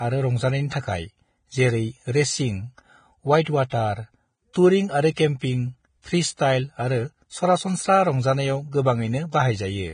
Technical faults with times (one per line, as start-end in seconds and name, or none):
0.00-9.94 Vorbis compression
3.44-3.72 pre-echo
4.53-4.55 pre-echo
5.12-5.41 pre-echo